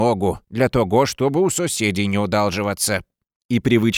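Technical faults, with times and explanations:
No technical faults detected.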